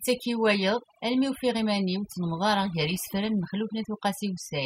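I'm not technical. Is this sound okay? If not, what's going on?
No. Throughout the speech, the background drops and breaks up into twinkling, warbling specks. This is overdone noise removal: a cleanup tool set too strong shuts off quiet parts of the sound it mistakes for noise, taking some voice with them.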